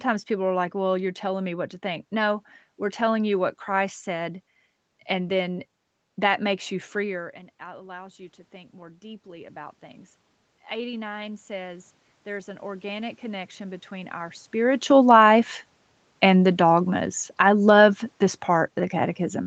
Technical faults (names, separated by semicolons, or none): automatic gain rising; automatic gain falling